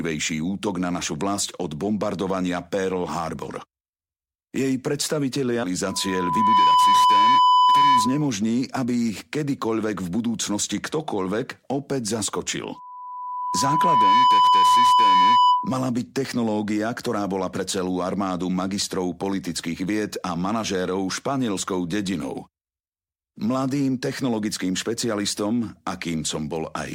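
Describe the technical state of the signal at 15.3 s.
At 15.3 s a loudspeaker feedback squeal is sounding, spanning 12.75 to 15.80 s. The microphone is re-amplifying its own loudspeaker, and loop gain above unity at 997 Hz lets a single tone swell over about a second and a half to roughly 10 dB above the signal.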